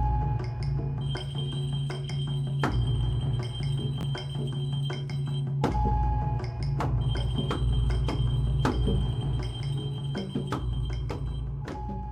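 At 4.01 to 4.03 s, chunks out of order: one 10 ms chunk of audio arrived a chunk late and was played after the chunk that should have followed it, so two neighbouring 10 ms pieces are swapped. Nothing is missing, but the sound briefly jumbles, with three hard joins. A waveform shows three abrupt steps where the trace fails to continue smoothly.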